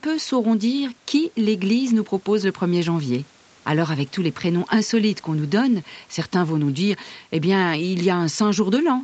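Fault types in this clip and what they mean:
No faults found; the speech tops out at 8 kHz, which is the normal bandwidth limit of a WebRTC call path after standard call microphone processing.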